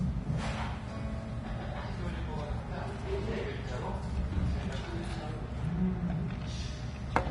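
A recording of everyday sounds, with Vorbis compression damage plainly audible throughout. Nothing remains above 10.6 kHz, and the treble below that cut-off is grainy and hissy, likely from coarse quantisation of the residue at a low bitrate, roughly 29 kbps.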